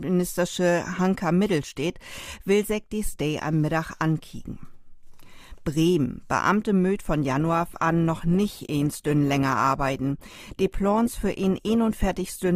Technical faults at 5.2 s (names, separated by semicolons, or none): none